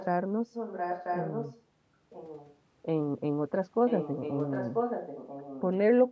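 Echo leak appears at 0.00–0.06, 0.51–1.62, 2.10–2.56 and 3.86–5.61 s: a delayed copy of the speech trailing it by about 0.99 s. The cause is likely a far-end loudspeaker whose echo canceller let part of the microphone pickup return down the line. The copy is strongest from 0.51 s, only about 5 dB under the speech. It is faint near 2.1 s and in the brief opening scrap, and moderate from 3.86 s.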